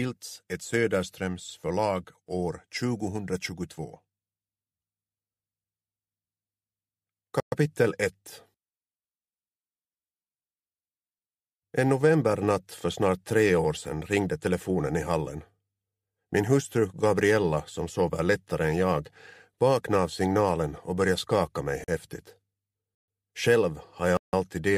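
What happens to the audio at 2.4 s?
Nothing goes wrong at 2.4 s; the audio carries on intact through that moment, with no dropout, click or distortion to be heard.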